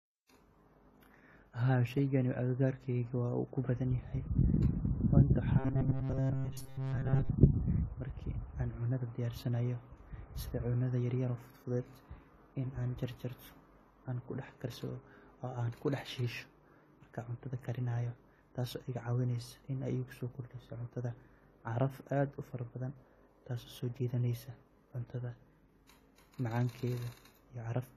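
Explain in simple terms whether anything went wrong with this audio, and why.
The whole clip sounds dull and smeared, with nothing above about 14 kHz. That damage is plainly audible and likely comes from AAC compression. To save space, the encoder throws away the top end and coarsens what's left, so the speech loses its crispness.

From 5.59 to 7.30 s, the speech turns into a rigid, metallic buzz at about 133 Hz. This is robotic sound from repeated short buffers, likely because fresh audio arrived too slowly. Playback filled the gaps by looping scraps about 7.5 ms long, and those repeats replaced most of the real sound in that stretch.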